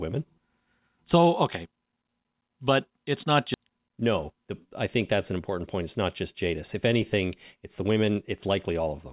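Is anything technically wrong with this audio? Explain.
Yes. The speech was carried over a call path, likely a narrowband G.711-type codec with nothing above 4 kHz, and it has two kinds of timing fault.

Skip ahead, 3.54 to 3.56 s, right after "but it's not": the receiver discarded about 0.7 s of queued audio to catch up, so playback jumps forward with no gap and the two sides are joined almost directly.

Jitter buffer speed-up, 3.64 to 4.68 s (ending just before "I think that's"), 5.32 to 6.07 s (just after "I think that's"), and 6.46 to 8.87 s: the buffer held excess delay, so the receiver trimmed many tiny pitch-period slices. The result is speech running 7%, 9% and 8% fast at unchanged pitch, losing roughly 70, 70 and 200 ms, and sounding hurried.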